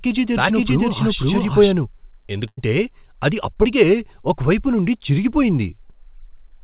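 From the very start to 1.72 s, the speech is heard twice, a second copy about as loud trailing by roughly half a second and stopping abruptly: a doubled audio track, likely from a slower second capture path. At 2.48 to 2.59 s the last sound is held and fades before jumping ahead, a burst of packet loss where about 0.1 s went missing and was filled by continuing the last sound. At 3.63 to 3.66 s a brief smear marks a short concealed packet loss, where about 20 ms never arrived in time and was patched over. Throughout, the call path passes nothing above 4 kHz, which fits G.711 A-law at 64 kbps.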